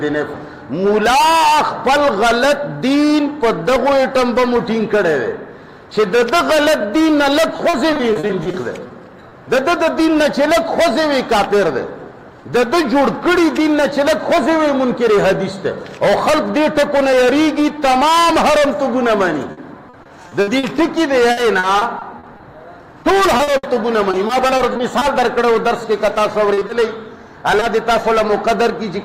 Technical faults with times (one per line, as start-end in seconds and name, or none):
7.57-9.33 repeated packet loss (robotic sound)
19.51-20.65 repeated packet loss (robotic sound)
21.31-22.41 repeated packet loss (robotic sound)
23.03-25.03 repeated packet loss (robotic sound)
26.53-26.71 short concealed packet loss
27.59-27.63 short concealed packet loss